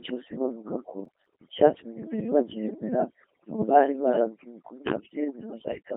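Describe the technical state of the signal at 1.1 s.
At 1.1 s the sound sits inside a burst of processor overload crackle running from 1.05 to 1.37 s. Many small buffers, on the order of 5 ms each, miss their deadlines and come out as silence, so the result is gritty tearing rather than one clean dropout.

Underneath, the Codec 2 vocoder rebuilds the speech from pitch, voicing, energy and envelope alone. That gives a robotic, buzzy tone confined to 200 Hz to 3.5 kHz, consistent with its 2.4 kbit/s mode, where plain band-limiting would keep natural timbre.

Overdone noise removal also leaves near-silent gaps with twinkling specks, which sound different from the crackle's hard-edged breaks.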